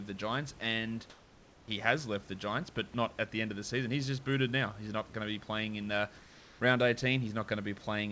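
From 1.10 to 1.68 s, just before "has left the", there is comfort noise in place of the background. The real room noise drops out for 0.58 s. A steady, featureless hiss about 3 dB quieter fills the pause. The same swap happens from 6.18 to 6.60 s, right after "be playing in uh". The likely cause is discontinuous transmission. The sender stopped sending during the pause, and the receiver synthesised noise to cover it.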